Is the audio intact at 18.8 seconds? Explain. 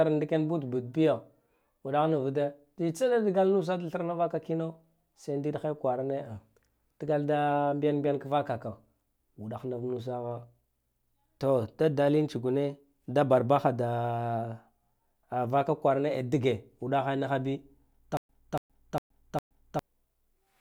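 No, 18.8 s falls inside a stutter with silent gaps running from 18.17 to 19.79 s. The same 285 ms burst of speech comes back four times, each followed by about 121 ms of dead digital silence, so it ticks along on a steady 405 ms cycle. The likely cause is a stalled stream or player replaying its last fragment on each retry, then running dry. Whatever should have played there is just gone.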